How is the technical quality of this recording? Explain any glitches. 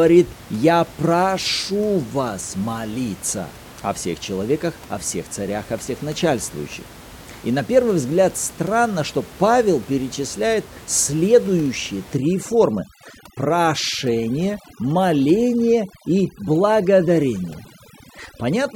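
The recording suffers from overdone noise removal in its final stretch. From 12.17 s, right after "перечисляет следующие", to the end at 18.76 s, a noise reduction stage set far too aggressively shuts down individual frequency bands it mistakes for the room noise, which sits about 21 dB below the speech. Quiet parts of the speech vanish with them, leaving near-silent gaps sprinkled with twinkling specks.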